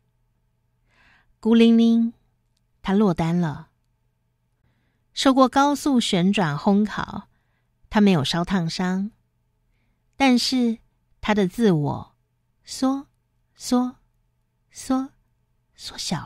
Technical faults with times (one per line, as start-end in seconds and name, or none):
4.61-4.64 Bluetooth dropout